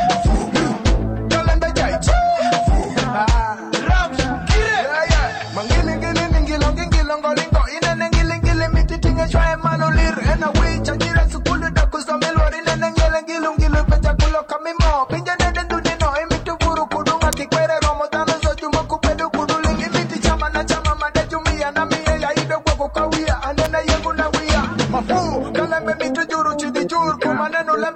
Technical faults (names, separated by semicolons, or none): electrical switching spike